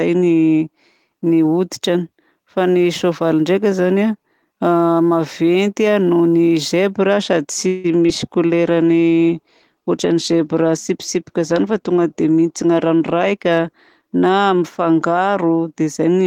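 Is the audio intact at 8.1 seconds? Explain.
No. Short concealed packet loss hits from 8.06 to 8.10 s, just after "sady tsy". About 20 ms of audio never reached the decoder in time, and the receiver patched roughly 18 ms by extending the preceding sound before blending back, leaving a brief smear or wobble.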